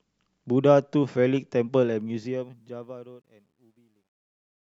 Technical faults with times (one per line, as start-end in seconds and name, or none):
1.86-4.63 truncation distortion on a fade